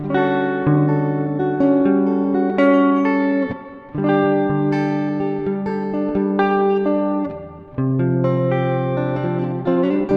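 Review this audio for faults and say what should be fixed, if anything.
Clock drift between sender and receiver runs throughout the clip. The sending device's clock is running roughly 4 percent fast, so audio arrives quicker than the receiver plays it out. The jitter buffer keeps filling, and the receiver must discard material to keep latency from growing.

Repeated timing corrections run from 0.67 s to 10.13 s, where the receiver trims short pieces to play the sound back at 104 percent of its pace. The cuts all go the same way but are unevenly spaced.

To prevent this, lock both ends to a common clock or use adaptive resampling at the receiver, so the drift is absorbed smoothly instead of being corrected by cutting pieces out.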